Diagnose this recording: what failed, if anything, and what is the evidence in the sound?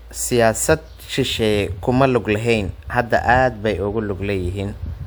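Nothing in the signal chain appears to have failed: the speech comes through continuous and intact at a steady level, with no audible break, distortion or processing artefact at any point.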